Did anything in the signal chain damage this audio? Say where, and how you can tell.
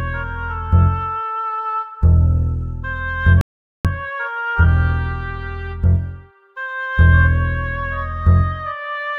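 Yes. At playback, the music cuts to silence at 3.41 s and stays silent until 3.85 s, a gap of about 0.44 s. This is a playback stall. It was likely caused by the player running out of buffered data or having its output thread blocked. Nothing reached the output until it recovered. The music then resumes from the point where it stopped.

From 3.85 s to 4.71 s the music runs hurried, at 1.5 times normal speed, with its pitch unchanged. This is time-compressed catch-up, also at the playback stage. To clear the backlog built up during the stall, the player cuts out short slices of audio and cross-fades across the joins. Normal pace returns at 4.71 s.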